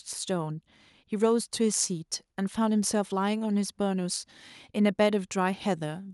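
Nothing stood out on listening to the speech.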